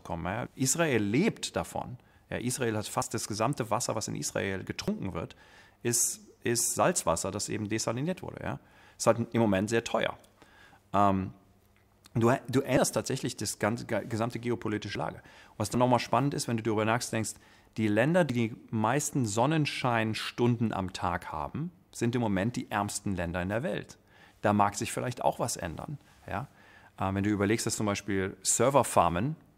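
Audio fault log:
3.02, 4.88, 14.95, 15.74 and 18.30 s: dropped buffer (overrun). Each is a point where the sound jumps ahead about 50 ms with no silent gap, likely from samples overwritten before being read.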